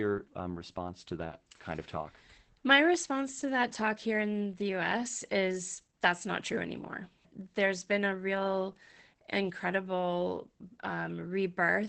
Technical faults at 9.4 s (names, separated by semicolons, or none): Opus voice compression